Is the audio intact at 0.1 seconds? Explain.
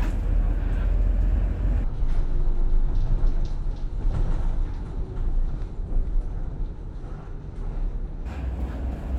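Yes, the audio is intact at 0.1 s, with no fault present at that moment.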